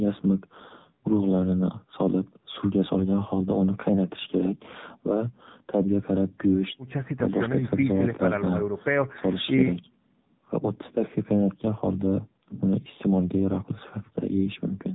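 From start to finish the speech carries the sound of the AMR narrowband mobile codec. Everything above 4 kHz is gone, and the voice has a buzzy, synthetic edge because each 20 ms frame rebuilds it from a vocal-tract model fed by a handful of pulses. The roughness points to one of the lower AMR modes, around 7.4 kbps. That buzz is what separates it from a simple low-pass filter, which would dull the sound but leave the voice natural.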